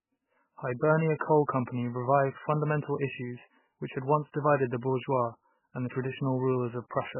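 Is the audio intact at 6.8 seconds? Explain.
No. At 6.8 s, as throughout, there is nothing above 3 kHz and the sound is watery and swirly, likely from MP3 compression starved of bits, consistent with about 8 kbps.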